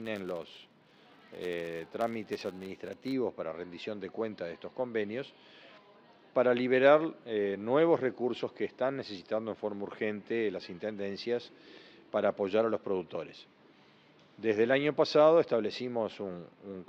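From the start of the clip to about 3.15 s, a filter restarted on every block: its internal state is cleared at each block boundary, so it begins every block as though the input had been silent. Each restart leaves a small transient, and these arrive at a steady 100 Hz, which points to blocks about 10 ms long. The result is a buzz at 100 Hz riding on the sound, growing louder and quieter with the level of the signal, until it stops at about 3.15 s.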